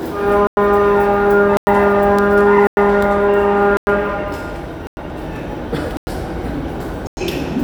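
Everyday sound with a gap between chunks: 100 ms silences at 0.47, 1.57, 2.67, 3.77, 4.87, 5.97 and 7.07 s, one after every 1.0 s chunk. Unlike a dropout, the sound resumes exactly where it stopped, with nothing missing.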